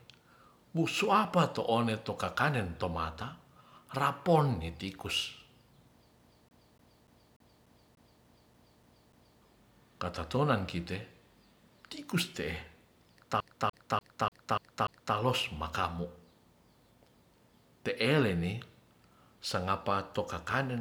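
From 6.19 to 9.42 s and again from 13.40 to 15.16 s, the speech shows the CD stuck on one turn: the laser jumps back one track each rotation, replaying a 0.29 s slice with a brief mute at each jump, eleven then six times. The first ends before "ktatonan kite".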